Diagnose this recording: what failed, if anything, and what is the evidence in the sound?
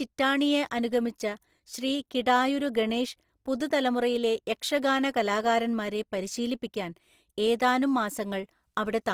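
The codec stage is at fault: the speech likely passed through Opus compression in its CELT music mode, at a rate fitting about 24 kbps. Bit-starved bands are refilled with folded or noise content, so voiced sound is grainy and rough throughout, while full bandwidth survives.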